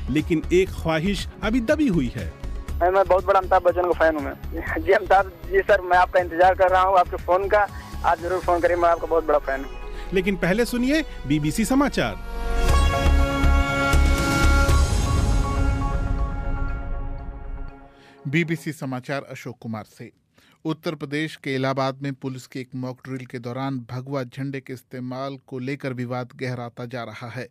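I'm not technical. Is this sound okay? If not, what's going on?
Yes, it sounds fine, with nothing here that needs fixing.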